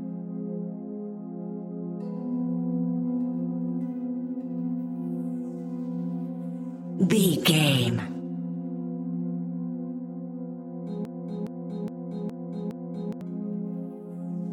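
At 11.05 s the audio falls into a broken-record loop: a roughly 415 ms fragment plays five times back to back until 13.21 s. It's most likely a stalled player or stream resending its last chunk, so whatever belonged there is simply gone.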